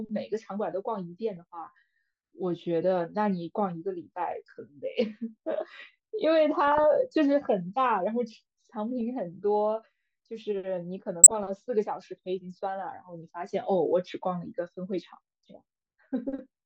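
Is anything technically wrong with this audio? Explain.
Yes. DAB burbling occurs at 1.37–1.43 s, 6.67–6.84 s, 9.01 s and 11.23–11.43 s. Bit errors of a fraction of a percent slip past error correction and corrupt MP2 scale factors and samples, so individual sub-bands jump in level for up to a frame, putting short blips of noise over the speech.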